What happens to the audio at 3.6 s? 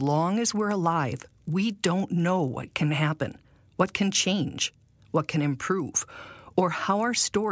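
At 3.6 s the speech carries the fault of a resampler restarted on every block, which runs through the whole clip. Each 40 ms block was converted on its own, which fits a 24 kHz to 16 kHz rate change, so the converter lacked the real neighbouring samples at every block edge and left a small error there. Those errors repeat at 25 per second, heard as a buzz riding on the speech wherever there is signal.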